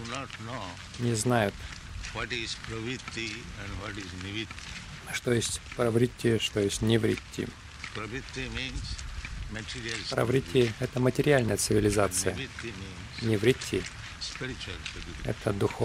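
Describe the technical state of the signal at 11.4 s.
At 11.4 s the signal is intact, with no dropout, distortion, noise burst or other fault audible at that moment.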